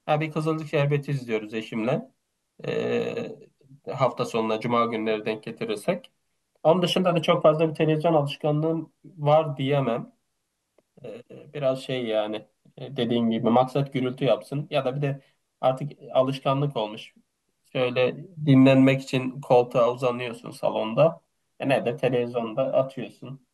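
No technical faults can be heard anywhere in this speech recording. There is no moment that calls for closer attention.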